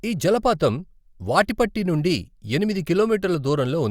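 No technical faults can be heard in the recording; the speech signal stays continuous and intact throughout.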